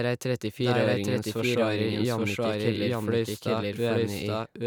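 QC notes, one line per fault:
Throughout, doubled audio track. The speech is heard twice, a full-level copy trailing the original by roughly 0.7 seconds. The copy has no decay or room colour, so it is not an echo. Likely a second capture through a slower path, or two misaligned copies in the edit.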